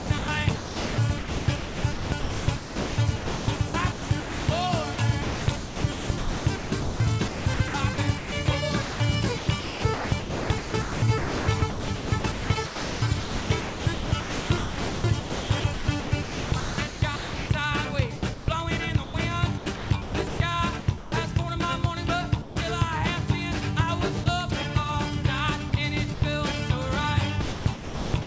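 Sound chopped by the voice detector runs from 0 to 17.5 s, then at 18.16–18.48 s, 19.04–21.12 s, 25.70–26.22 s and 27.42 s to the end. The sender's detector, likely gating repeatedly, swapped stretches of quiet sound for comfort noise (about 10.5 s in the opening section alone), so the audio stutters. Sound dropped by the voice detector occurs at 22.42–22.56 s and 24.24–24.26 s, where 140 ms and 20 ms of sound give way to steady comfort noise. This is likely because the detector mistook faint material for background until it triggered again. Throughout, the call codec's band limit leaves nothing above 8 kHz.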